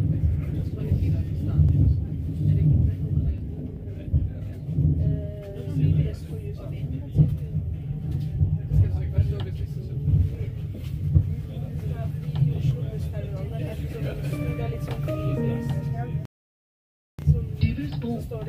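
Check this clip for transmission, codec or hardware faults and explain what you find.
Four sharp clicks are present, at 1.69, 3.38, 10.35 and 12.71 s. Each is likely dropped samples: under half a millisecond missing, so the waveform jumps abruptly, producing a brief broadband tick.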